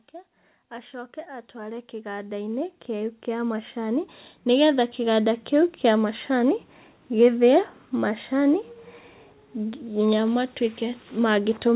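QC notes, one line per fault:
0.56 to 5.84 s, automatic gain rising: the level creeps up steadily for over five seconds, about 19 dB in all, settling just before "ĩa macani". The gain control decided the input was too quiet and kept turning it up, so the talker and the room noise swell together rather than the voice getting closer. It comes over a call-codec path that already has nothing above 4 kHz.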